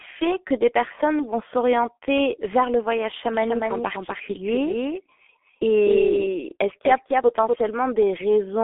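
Throughout, the speech sounds muffled and hoarse, with smeared consonants and nothing above 3.7 kHz. This is heavy G.723.1 codec damage, fitting a 6.3 kbit/s stream on a narrow telephone line.

From 3.34 to 7.56 s, just after "s'orienter vers le voyage", a dry echo about 5 dB quieter trails about a third of a second behind. This doubled audio track likely comes from a second, delayed capture path.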